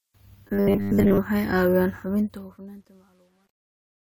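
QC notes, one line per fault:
0.48–1.18 s, robotic sound from repeated short buffers: for most of this stretch a rigid metallic buzz near 100 Hz rides over the speech, which points to a 10 ms slice being replayed, likely because audio arrived too seldom. Unlike comb filtering, the buzz stays locked regardless of intonation.
2.02–4.06 s, truncation distortion on a fade: as the fade-out drops, the tail turns gritty, worst from 2.61 s to 4.06 s, which fits a fade stage keeping about 11 bits without dither. Dither would leave steady soft hiss instead.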